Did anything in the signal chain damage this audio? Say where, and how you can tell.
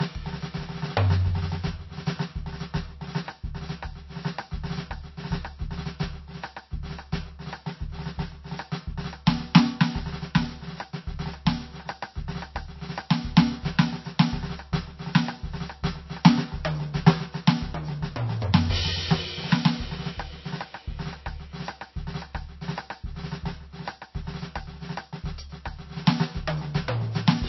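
Yes, at the codec stage, and it runs through the whole piece of music. Nothing comes through above 5.8 kHz, so the top end sounds dull despite the file's generous size. That points to low-bitrate audio saved at a high bitrate: most likely a starved MP3 encode, something down around 26 kbit/s, later re-saved as a roomy MP3. The second pass can't bring back what the first one stripped out, so the cut-off and the damage stay.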